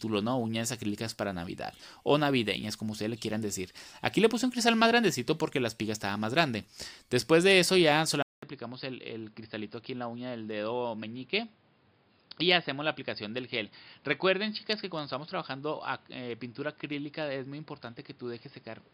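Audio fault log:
8.23–18.93 s, input switched to a poorer device: after a gap of about 200 ms the sound comes back duller and boxier, with nothing above 5.1 kHz, a level drop of around 5 dB, and new background noise roughly 30 dB under the signal. That mix of narrower band, different tone, lower level and fresh noise floor, all arriving together after a short dropout, is most likely the input being moved to a lesser microphone or a headset's call profile.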